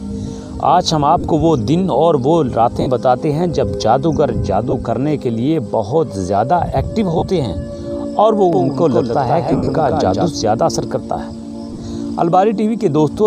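Lost LE Audio frames at 1.21 s (30 ms), 2.81 s (52.5 ms), 4.71 s (22.5 ms) and 7.18 s (37.5 ms) are patched by the LC3 decoder from the last spectrum with random signs. Each gap sounds like a brief noisy smear, and on a spectrogram tonal lines dissolve into diffuse noise. From 8.53 s to 10.29 s a doubled audio track follows about 150 ms behind at about 5 dB down, likely from a second, slower capture path. It is heard as a dry, abrupt slapback with no reverb tail. The waveform shows repeated shapes offset by that spacing. Within it, losses scattered across 165 ms from 9.52 s smear again, and a final cluster spread over 75 ms from 11.73 s flickers noisily.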